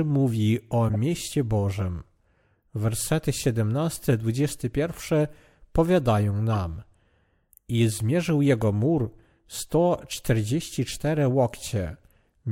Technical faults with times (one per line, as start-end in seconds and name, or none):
0.88-0.96 corrupt frame decoded